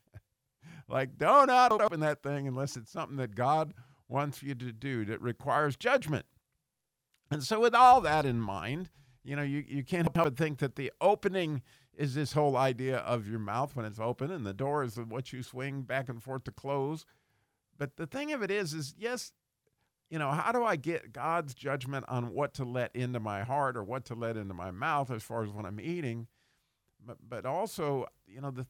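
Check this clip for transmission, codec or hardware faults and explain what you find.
Two chunks out of order faults are present. At 1.71 to 1.88 s (after "do not", before "that thing unless it's") and at 10.07 to 10.24 s (after "know you you can't", before "think that the opening"), an 85 ms chunk was delivered one chunk late and played after the chunk that should follow it. Nothing is lost, but each 0.17 s stretch sounds briefly scrambled, with three abrupt joins.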